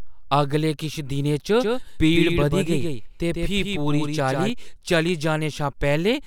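A second, slower capture path or an out-of-step edit has likely mixed the same speech in twice between 1.60 s and 4.50 s, producing a doubled audio track. The extra copy trails the original by roughly 150 ms and sits about 5 dB quieter. It is full-band and dry, with no decay or room colour, so it reads as a hard slapback echo rather than reverberation, and it switches on and off abruptly at both ends of that span.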